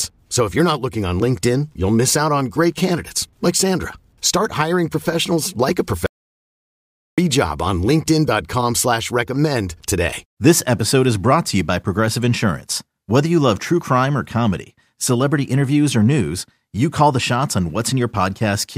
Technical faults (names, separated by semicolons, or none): audio dropout to silence